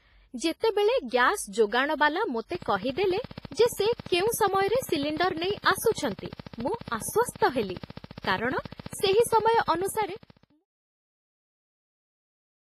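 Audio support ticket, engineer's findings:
WMA compression, whole clip. Heavy codec damage: ringing, washy speech, hiss breathing with the signal, nothing above 15.4 kHz. Likely a basic WMA 1 encoder at a low bitrate, around 24 kbps by ear. Long transform blocks smear quantisation noise over tens of milliseconds, and weak spectral lines get zeroed, hence the wash.

Train of clicks, 2.55 to 10.51 s. Steady ticking at 14.6 per second, regular spacing, about a hundred clicks, peaks around 5 dB above the speech. Same shape each time, audible in the gaps too. Likely pulses from interference off nearby gear, a dodgy connection or a noisy supply. The clicks run on into the editor's smooth fade-out, which starts around 9.5 s and finishes at 10.66 s.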